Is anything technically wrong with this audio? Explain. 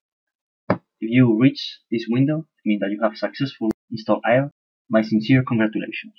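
No, nothing technically wrong can be heard in this audio. No working path is singled out for comment, so there is nothing further to describe.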